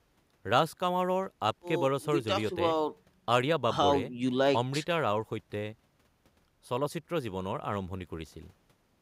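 No technical faults can be heard in the speech.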